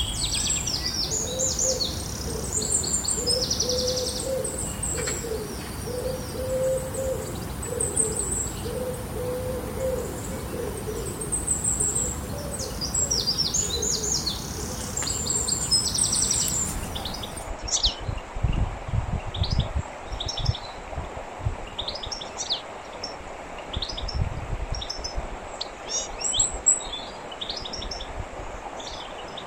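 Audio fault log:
4.65 to 4.71 s, DAB burbling: bit errors at a low rate slipped past error correction into the MP2 data, putting short blips of noise in single sub-bands over roughly three frames, a brief burble.
15.96 s, repeated buffer: audio arrived late, so a block of about 1.45 ms, which fits a 64-sample buffer, played once more, a single hard join heard as a click or brief buzz.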